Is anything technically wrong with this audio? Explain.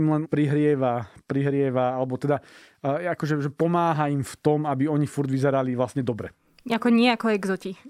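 No, nothing technically wrong stood out when listening to this speech recording.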